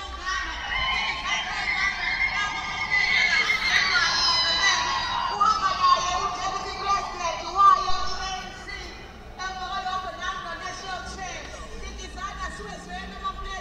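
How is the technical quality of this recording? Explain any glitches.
One glitch stands out: a phantom power thump from 7.90 s to 8.32 s. It is a deep, low thud that peaks at about -16 dBFS and dies away quickly, with a decay of about 95 ms, leaving a soft low-frequency tail before the sound carries on. The cause is a supply being switched on or off while the input was live. That sudden DC step passes through the coupling capacitors and reaches the recording as this brief bass pulse.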